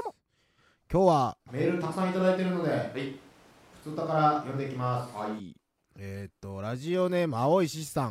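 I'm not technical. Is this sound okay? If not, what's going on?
No. From 1.50 to 5.38 s the speech suddenly turns hollow and roomy, then snaps back, which sounds like a switch to a distant microphone, likely after the close one dropped out. Loudness stays about the same, so it's not simply a volume dip.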